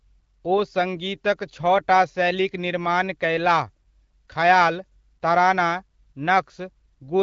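No technical faults can be heard in this recording.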